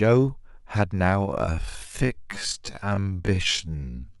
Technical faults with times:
1.21-4.20 time-stretched section

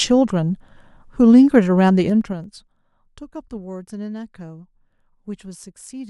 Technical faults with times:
2.04-2.72 zipper noise

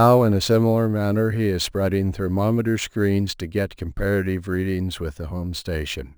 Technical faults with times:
0.00-6.17 crude rate conversion

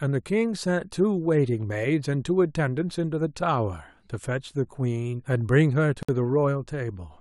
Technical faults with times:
6.03-6.09 gap at a join of encoded pieces

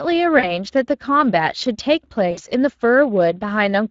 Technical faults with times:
0.00-3.91 Speex codec
0.39-0.55 VoIP packet loss concealed by the speech codec
2.31-2.52 VoIP packet loss concealed by the speech codec

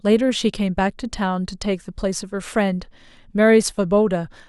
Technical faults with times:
none

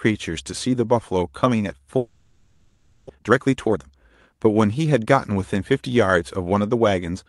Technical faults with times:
1.97-3.11 long network dropout
3.15-5.72 jitter buffer speed-up

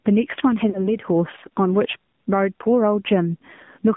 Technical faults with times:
0.00-3.97 gain pumping
0.00-3.97 AMR narrowband mobile codec
0.70-0.92 lost AMR speech frames

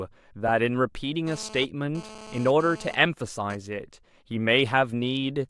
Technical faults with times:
1.27-3.55 GSM phone buzz

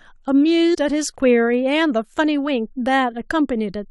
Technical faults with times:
0.73-0.75 compressed frames skipped

